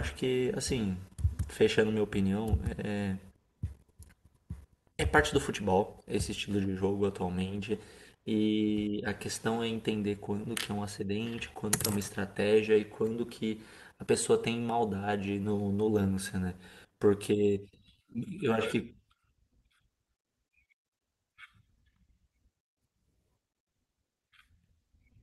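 From 14.81 to 16.32 s the speech picks up a scatter of brief ticks and tiny smears. These are scattered short gaps: about ten lost or late packets, each roughly 10 ms, which the receiver covered by continuing the preceding sound. Together they conceal around 100 ms, some 7% of the stretch.

Between 16.89 and 17.38 s the speech drags, running at 91% speed with its pitch unchanged and sounds drawn out. This is a jitter buffer slow-down: the receiver repeated single pitch periods to rebuild its reserve, adding 52 ms.

From 19.48 to 19.95 s the speech briefly hurries, running at 109% speed with the pitch intact. This is a jitter buffer speed-up: too much audio had built up, so the receiver cut short pieces of a pitch period or so, removing roughly 50 ms.

Throughout, the audio carries Opus call coding with content up to about 12 kHz, which fits a call bitrate near 32 kbps.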